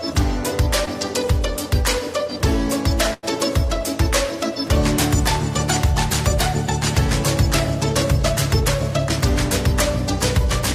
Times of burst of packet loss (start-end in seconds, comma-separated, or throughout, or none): 3.13-3.25